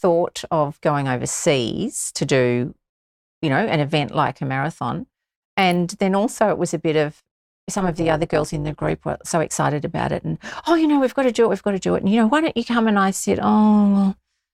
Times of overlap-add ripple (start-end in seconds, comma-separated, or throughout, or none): 7.78-8.93